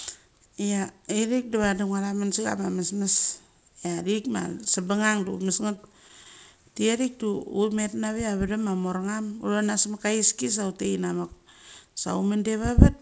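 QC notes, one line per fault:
4.64 to 6.28 s, scattered short gaps: roughly ten brief holes across this stretch, none longer than about 20 ms, together about a tenth of a second. Each was patched by extending the preceding sound. Speech stays clear, with small ticks and smears.
6.57 to 7.02 s, jitter buffer slow-down: the receiver repeated single pitch periods to rebuild its reserve, adding 36 ms. Speech runs at 94% speed with unchanged pitch. Sounds stretch slightly, through the G.722 call path.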